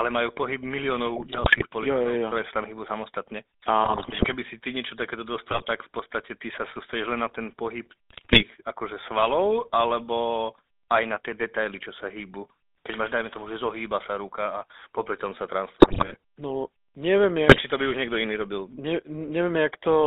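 The whole recording carries the GSM full-rate codec. The speech is confined to roughly 300 Hz to 3.7 kHz. The codec rebuilds the voice from a vocal-tract model and a coarse pulse train. That leaves a plainly buzzy, gravelly roughness, which fits a 13 kbps GSM link.

GSM bit errors break through six times: 1.16–1.67 s, 3.84–4.35 s, 5.48–5.69 s, 8.10–8.43 s, 15.80–16.16 s and 17.48–17.63 s. The third falls between "si ty niečo takéto" and "v podstate". The fifth follows "a popri tom sa". The last comes just before "to by už niekto". Corrupted filter, pitch and gain values reach the decoder. The voice turns into squawks, pops and gargling.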